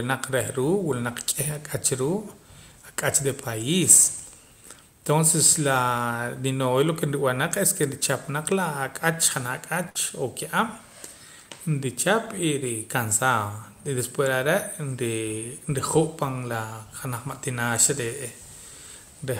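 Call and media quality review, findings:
Burst of packet loss, 9.89 to 9.97 s, in the speech. Symptom: short held sound fading out, then speech resumes slightly ahead. Probable component: network path and receiver jitter buffer/concealment. Mechanism: consecutive packets lost or late. Receiver extended the last sound for about 55 ms while attenuating it. About 60 ms of speech was never played, so the resumed audio skips forward.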